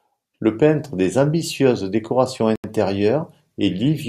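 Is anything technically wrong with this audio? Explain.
Yes. From 2.56 to 2.64 s, just after "peintre des ambitieuses décorations", the speech drops to 83 ms of silence, then resumes. This is likely a Bluetooth stall: interference delayed packets and the headphone buffer emptied until retransmissions arrived. The waveform shows a flat gap, and the spectrogram a blank vertical band.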